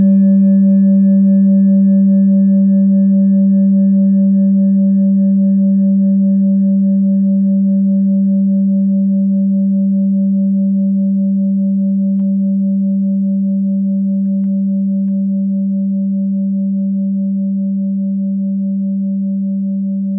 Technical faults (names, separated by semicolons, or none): none